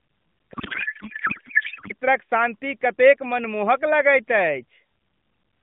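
In this speech clip, from 0.54 to 1.93 s a codec payload misread, octet-aligned AMR read as bandwidth-efficient, turns the speech into garbled noise and warble that barely tracks it, heard over an AMR narrowband line limited to about 150 Hz to 3.6 kHz.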